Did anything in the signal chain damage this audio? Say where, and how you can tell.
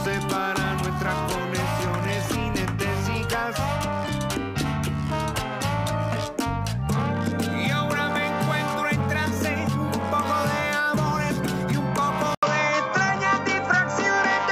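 Yes. At 12.35 s the waveform drops out for 80 ms, then the sound turns dull to the end. The spectrogram shows a flat ceiling near 7.6 kHz and a new noise floor roughly 45 dB down, at unchanged level. This is likely an input switched to a poorer device at the driver stage.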